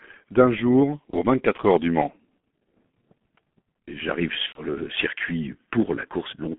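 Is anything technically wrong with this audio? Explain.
Yes. Throughout the clip the speech has the muffled, hoarse quality of the G.723.1 codec. The band runs only from about 150 Hz to 3.5 kHz, and the heavy coding damage fits a low-rate stream of around 6.3 kbit/s. The codec models the voice in coarse 30 ms frames and updates that model slowly, so consonants smear into their neighbours and the voice takes on a rough, grainy edge. Plain band-limiting alone would sound dull but clean, and that is what separates this from a simple telephone filter.

There is also VoIP packet loss concealed by the speech codec. It occurs from 1.10 to 1.17 s, right after "d'un jour", and from 4.46 to 4.65 s, just before "le circuit". Where audio went missing, the decoder kept extrapolating from its last pitch and filter state while lowering the gain. The gaps therefore come out as a buzzy tone or coloured noise that fades, rather than a click, and the speech stays weak or distorted as it recovers. 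The first gap lasts 30 ms, which points to a single lost frame. The second is longer, at 90 ms, consistent with three frames, so the codec mutes it from the third lost frame.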